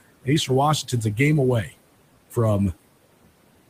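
Noise suppressor artifacts run through the whole clip. The suppressor treats the steady room noise, which sits about 17 dB below the speech, as something to remove, pulling it down by about 21 dB in each band it judges to be noise. Because that decision is made frame by frame, the residual background dips in the pauses and comes back up underneath the speech.

From 1.64 to 1.75 s the suppressor cuts into the speech itself. For roughly a tenth of a second it misreads part of the speech signal as noise and attenuates it along with the background, with the level dropping by as much as about 14 dB. The result is a brief stretch where the sound seems swallowed, with a soft portion of the speech going faint before full level returns.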